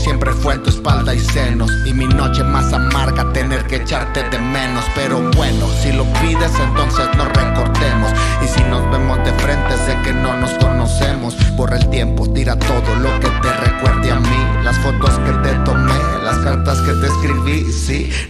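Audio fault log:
No faults heard anywhere in this clip.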